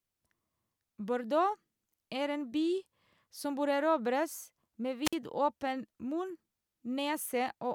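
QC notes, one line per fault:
5.04–5.15 s, wireless microphone squelch dropout: the FM radio link fades, a short swell of hiss rises, then the receiver's squelch mutes output for 51 ms before the speech resumes. Spectrogram shows broadband noise smear, then a blank vertical gap; the waveform flattens near zero.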